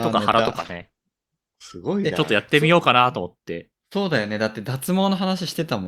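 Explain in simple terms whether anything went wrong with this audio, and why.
From 0.51 s to 1.81 s the speech turns rough, watery or muffled, then clears. This is a call bitrate drop: the connection briefly sent far less data, so detail was thrown away. Unlike a dropout, the sound never actually stops.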